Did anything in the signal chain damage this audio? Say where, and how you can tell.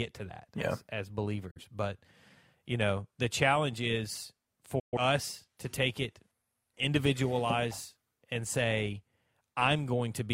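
Yes. The speech shows a digital broadcast dropout at the reception and frame-decoding stage. The receiver mutes from 1.51 to 1.61 s and again from 4.79 to 4.97 s, with a fast fade of about 8 ms into each hole. The losses, about 43 ms and 128 ms, fit one and three failed frames. On a waveform the envelope drops to a flat line. A spectrogram shows clean, full-band vertical gaps, and the missing material never returns.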